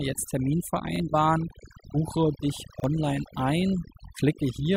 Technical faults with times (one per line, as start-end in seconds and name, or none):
0.00-4.77 overdone noise removal
0.96-1.00 repeated buffer
2.80-2.84 repeated buffer